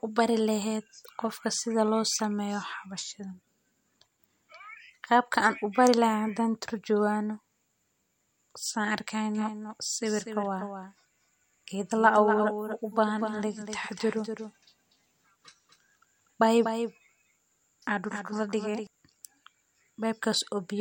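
From 9.35 s to 18.87 s the speech carries a doubled audio track. A second full-band copy trails about a fifth of a second behind, roughly 10 dB quieter. It switches in and out abruptly. A slower second path likely captured it twice.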